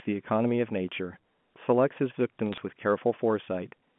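A brief burst of sharp ticks and crackle cuts through the speech from about 2.52 to 2.58 s, over the band-limited telephone sound of G.711 A-law coding. These are bit errors on a digital phone line. A fraction of a percent of the transmitted bits were flipped, and each flip corrupts a single sample. Errors landing on high-order bits, or on the sign of a loud sample, throw those samples far off, producing the clicks.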